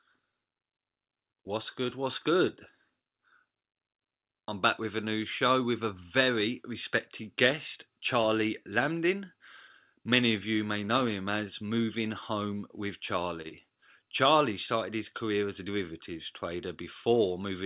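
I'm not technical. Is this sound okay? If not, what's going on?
No. At 13.42 to 13.47 seconds there is a short stall from a late packet: one piece of the call arrived late, so the last sound is held about 25 milliseconds too long. Right after, at 13.49 to 13.53 seconds, short concealed packet loss means about 20 milliseconds never arrived, and the gap was patched over, leaving a brief smear or wobble.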